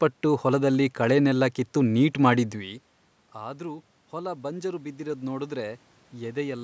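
From 2.52 s, just after "ಹೊಲದಲ್ಲಿ ಕಳೆನೆಲ್ಲ ಕಿತ್ತು ನೀಟ್", automatic gain rising sets in and lasts to 6.59 s. The input level falls by about 18 dB, as the talker moves away from the microphone. The automatic gain control treats this as too quiet. It raises its gain slowly, by about 8 dB. Speech and room noise swell together over several seconds. The level never fully recovers.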